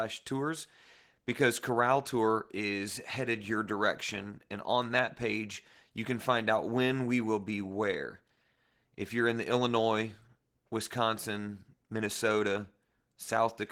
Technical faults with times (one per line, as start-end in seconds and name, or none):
0.00-13.71 Opus voice compression